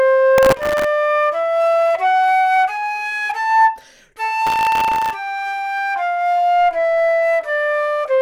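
The processor fell behind on its audio work twice in this recording of sounds, missing dozens of deadlines in a row on very short buffers, which fits a buffer of about 0.7 ms. Each miss repeated a sliver of old audio with hard edges, so processor overload crackle sits on top of the sound from 0.38 to 0.84 s and again from 4.47 to 5.14 s as a gritty, tearing burst that stops once the load eases.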